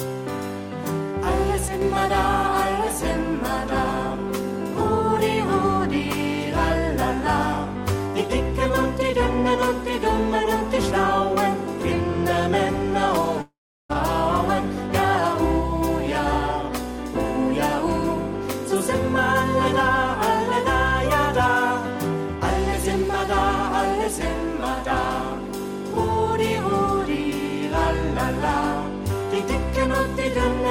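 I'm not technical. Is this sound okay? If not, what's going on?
No. From 1.68 to 1.82 s the sound briefly turns noticeably quieter. This is likely one channel dropping out: one side of the stereo signal is briefly lost, so only half reaches you.

From 13.41 to 13.91 s the sound smears into a fading buzz or hiss, then goes silent for about a third of a second before returning with about half a second missing. This is a long network dropout, likely a break in transmission the player couldn't cover.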